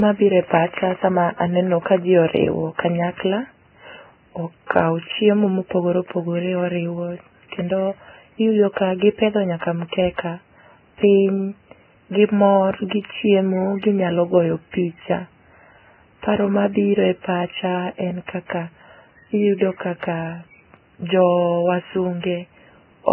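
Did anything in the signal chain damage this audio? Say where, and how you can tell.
Yes, at the codec stage, and the damage runs through the whole speech clip. Nothing reaches above 3 kHz, so the sound is narrow and muffled, and two different sets of codec artefacts are heard together. That combination points to transcoding between lossy codecs, likely a very low-bitrate Vorbis encode later re-encoded to AAC-LC. The second encoder spent its bits on the first one's damage and kept the 3 kHz ceiling.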